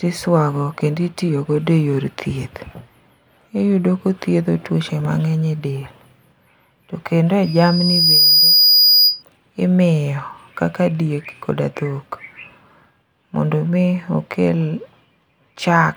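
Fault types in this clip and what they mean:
Loudspeaker feedback squeal: the microphone picks up its own loudspeaker, and the loop gain passes one at a single pitch. From 7.43 to 9.23 s, after "to kendo", a 4.9 kHz tone swells within a second to about 5 dB above the speech.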